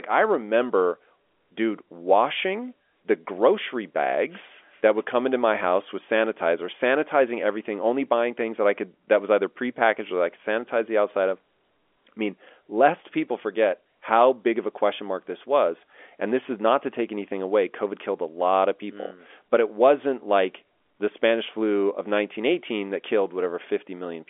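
Nothing is technically wrong with this speech clip, which has the narrow sound of an ordinary G.711 telephone line, with nothing above 3.7 kHz.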